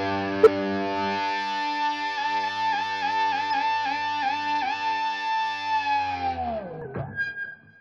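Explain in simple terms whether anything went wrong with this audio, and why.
Compressed frames were skipped at 0.43, 3.50 and 6.82 s. Small chunks of audio went missing, and the sound jumps ahead each time.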